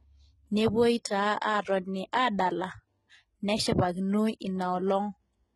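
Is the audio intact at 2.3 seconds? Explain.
No, not really. At 2.3 seconds the speech carries the same damage as the rest of the clip, and it sounds like heavy HE-AAC compression. The treble is rebuilt rather than real, likely from spectral band replication copying lower bands upward under a coarse envelope, so the s sounds come out gritty and lispy. Nothing survives above about 11.8 kHz, and the sound fits a very low bitrate, around 16 kbps.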